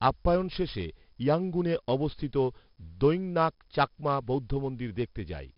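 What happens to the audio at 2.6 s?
At 2.6 s the speech carries the 4-bit ADPCM compression heard throughout: a gritty hiss that rises and falls with loudness, because each sample is stored as a coarse step from a prediction. Nothing sounds above 5.3 kHz, which fits a low sample rate. Unlike perceptual codecs, there is no swirling or warbling.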